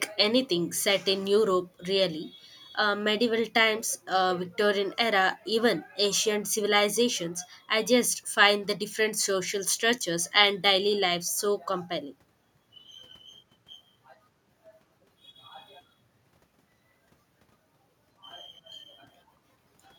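Nothing goes wrong anywhere in this bit of speech, so there's no fault to point to at any moment.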